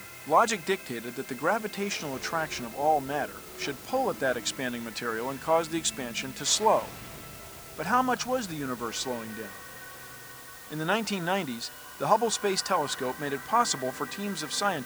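A steady, even hiss sits under the sound from start to finish, constant in level and texture, with no crunch or harshness riding on the louder passages. It is loud, roughly 20 dB below the signal itself. This is low bit depth with dither: the audio has been reduced to just 7 bits, and random dither noise was added before rounding, so the coarse quantisation error turns into smooth white noise rather than distortion.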